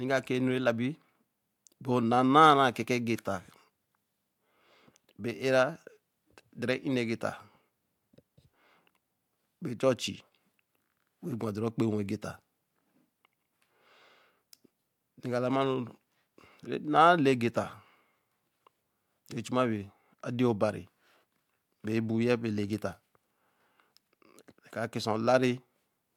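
No technical faults are audible.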